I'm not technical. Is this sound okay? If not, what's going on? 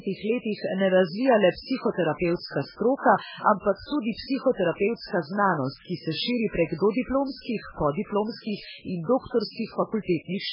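No. The speech sounds watery and swirly throughout, with nothing above 5.3 kHz, likely from heavy MP3 compression. Plain muffling would dull it without that warbling.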